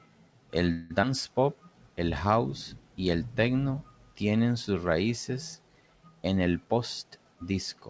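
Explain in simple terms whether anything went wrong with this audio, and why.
Call audio freeze, 0.72 to 0.92 s: the sound stalls into a fading buzz or hiss for 180 ms, likely because packets arrived late, then resumes where it stopped, with nothing lost.

Skip ahead, 1.02 to 1.05 s: roughly 70 ms of speech was dropped, so playback jumps forward and the two sides join almost directly.

Jitter buffer slow-down, 1.45 to 2.29 s: the receiver repeated tiny slices of sound to rebuild its reserve, adding 76 ms. Speech runs at 92% speed but keeps its pitch.

Jitter buffer speed-up, 6.64 to 7.75 s, just after "sus raíces en el": the receiver trimmed roughly 150 ms to reduce delay. Speech runs at 111% speed and sounds hurried.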